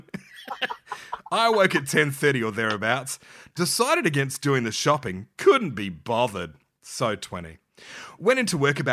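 No technical faults can be heard in this speech recording. At no point does any event stand out from the recording itself.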